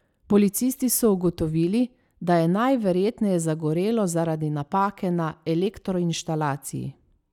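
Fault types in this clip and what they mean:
Periodic USB or driver dropouts: a recurring stall on the USB bus or in the audio driver skips around 10 ms of speech every 0.99 s, so from 4.68 to 6.65 s about three evenly spaced ticks sound where the audio jumps forward.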